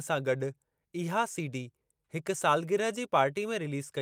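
Nothing stood out as a technical fault when listening to the speech in this clip.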